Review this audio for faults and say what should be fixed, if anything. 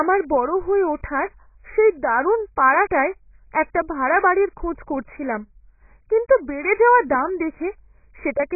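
The speech sounds dull and swirly all the way through, with nothing above 2.5 kHz. That's likely heavy AAC compression, consistent with a very low bitrate around 12 kbps. Re-encode from the original at 64 kbps or more.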